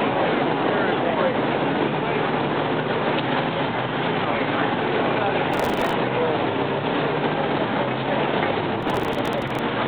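Processor overload crackle appears from 5.52 to 5.93 s and 8.74 to 9.59 s. Dozens of very short buffers, around 1.5 ms, are skipped, tearing the audio.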